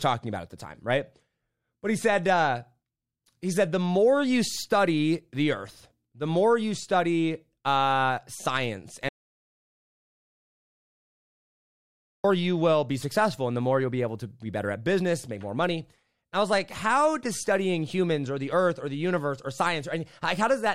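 Right after "you study uh science" at 9.09 s, there's an audio dropout to silence: dead silence, no room tone, for about 3.16 s, likely a lost input, until "you will be successful" at 12.24 s.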